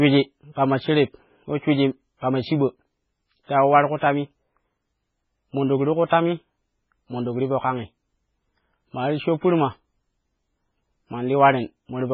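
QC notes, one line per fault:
Throughout, MP3 compression: the speech sounds watery and swirly, with heavy codec damage and nothing above about 7.4 kHz. Weak frequency lines flicker on and off between frames. This is likely a low-bitrate MP3 encode, consistent with around 16 kbps.
2.18 to 2.23 s, 3.44 to 3.49 s and 3.96 to 4.02 s, pre-echo: a short hiss of 50 to 54 ms comes just before each attack, which sounds smeared. Quantisation noise sized for the loud onset spreads across the quieter start of its transform block.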